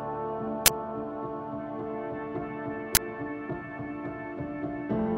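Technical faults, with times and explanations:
0.66 s and 2.95 s: uninitialised buffer. A 20 ms block plays before audio is written, so leftover memory bursts out as loud digital noise.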